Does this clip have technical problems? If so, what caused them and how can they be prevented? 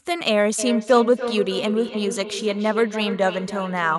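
Yes. From 0.58 s to the end, the speech comes back as thin, ringing repeats roughly every third of a second, the loudest about 9 dB below the speech: feedback echo between two devices, where one device replays the other's audio into its microphone. Muting one device's microphone and speaker, or using headphones, prevents it.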